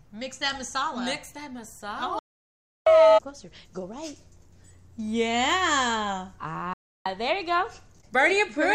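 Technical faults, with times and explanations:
2.19 to 2.87 s and 6.73 to 7.06 s, digital broadcast dropout: the receiver stops getting clean frames, fades out over about 3 ms, and mutes until good data returns. You lose roughly 0.67 s, then 0.32 s, of programme, and it picks up later rather than where it stopped.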